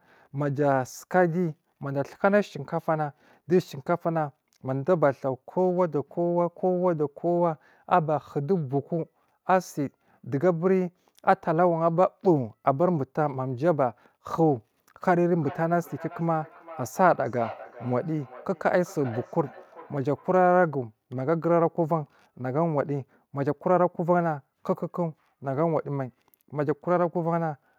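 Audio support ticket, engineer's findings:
Feedback echo between two devices, 15.35–20.62 s: speech returning every 0.4 s or so, thin and ringy, peaking about 18 dB under the voice. Likely second in-room device replaying this mic; local canceller only removes its own playback.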